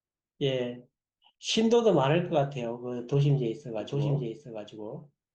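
From 3.80 s to the end, a doubled audio track appears: a second copy of the speech, roughly 5 dB quieter and around 0.7 s late, switches on abruptly, likely from a slower capture path. Unlike echo, it has no decay and no room colour.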